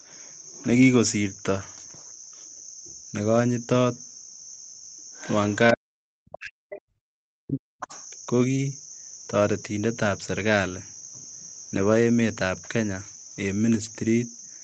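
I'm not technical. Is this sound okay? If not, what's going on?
No. Around 5.13 to 5.34 s, 5.50 to 5.55 s, 6.70 to 6.81 s and 7.80 to 8.05 s, a faint second voice slips in behind the speaker. This is the other side's voice leaking through, likely the far caller's sound from the loudspeaker being picked up by the microphone and not fully removed.

From 5.73 to 7.93 s, about two seconds, the speaker's voice sinks, at its worst almost to nothing. This is speech suppressed in double talk. Both people likely talked at once, and the echo removal turned everything down.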